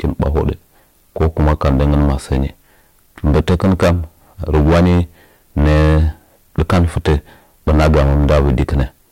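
From start to finish the speech is hard clipped, driven about 16 dB beyond what the stage can pass, so roughly a tenth of all samples are cut off flat. Every loud syllable carries a harsh fuzz. The waveform shows squared-off plateaus at both rails, and the spectrogram shows smeared energy rising into the high kHz range.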